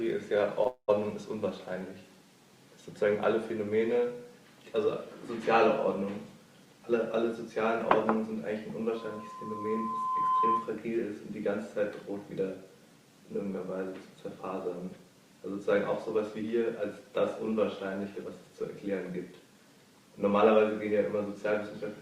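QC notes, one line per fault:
0.63 to 0.67 s, short stall from a late packet: A packet didn't make it in time and the jitter buffer ran dry, so the receiver stretched the last bit of sound for about 19 ms while it waited. Once the packet turned up, playback carried on from exactly where it left off, so nothing is lost. What you hear is a brief held-over moment with a faint buzzy smear, and everything after it now sits 19 ms later.
0.67 to 0.90 s, call audio freeze: This follows straight on from that stall and is a much longer wait, likely packets held up somewhere along the route. The receiver fills about 208 ms by continuing the last sound as a buzz that fades away, and about 90 ms of that is plain silence. When the audio resumes it picks up from the same point, so the gap is inserted rather than anything being cut.
6.66 to 7.25 s and 18.64 to 19.55 s, jitter buffer speed-up: Both times the buffer was holding more audio than it wanted, so the receiver trimmed out lots of tiny pitch-period-sized slices in a row to bring the delay back down. 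Playback runs at about 106% while the pitch stays put, so those stretches sound a bit rushed. The first pass drops roughly 40 ms and the second roughly 70 ms.
8.96 to 10.82 s, loudspeaker feedback squeal: A microphone is picking up the loudspeaker it feeds, and at 1 kHz the loop gain goes above one. That single tone feeds on itself and swells over about a second and a half until it sits roughly 5 dB above the wanted sound. The result is a steady whistle that grows into a squeal and holds until about 10.8 s.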